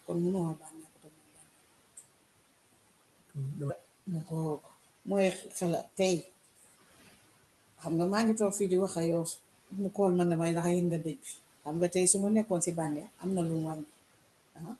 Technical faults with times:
0.00-14.80 noise suppressor artifacts
0.55-1.57 speech cut by the noise suppressor
6.45-6.73 speech cut by the noise suppressor
11.04-11.38 speech cut by the noise suppressor
13.01-13.24 speech cut by the noise suppressor
14.55-14.79 speech cut by the noise suppressor

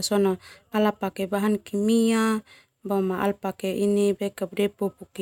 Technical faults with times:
none

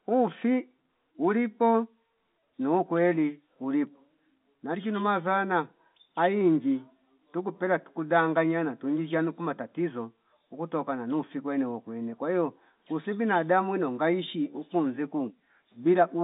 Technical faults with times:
none

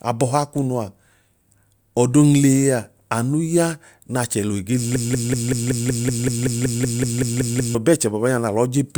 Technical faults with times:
4.96-7.75 broken-record loop

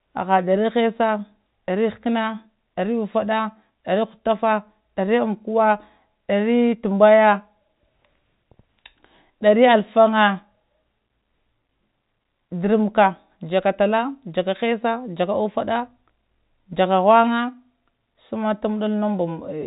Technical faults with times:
none

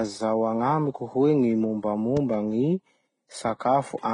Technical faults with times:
0.00-4.14 transcoding between lossy codecs
2.17-2.36 loud pop

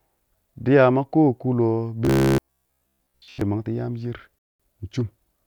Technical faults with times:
2.05-3.41 robotic sound from repeated short buffers
4.39-4.60 Bluetooth stall

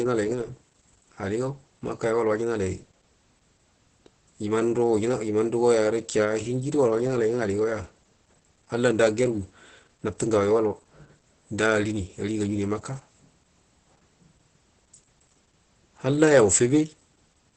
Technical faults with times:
0.00-17.56 Opus voice compression

